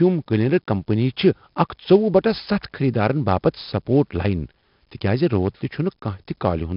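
Throughout, 4-bit ADPCM compression codes each sample as a coarse predicted step, leaving heavy gritty hiss on the speech and nothing above 5.3 kHz.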